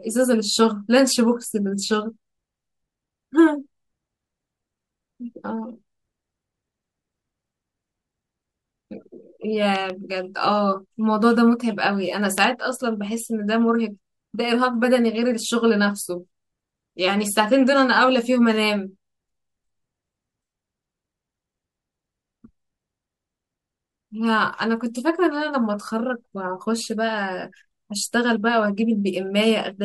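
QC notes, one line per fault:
9.76–9.92 s and 12.38–12.46 s: loud pop, each a double pop peaking about 10 dB then about 15 dB above the speech, which continues underneath; likely a plug, switch or static voltage pulse.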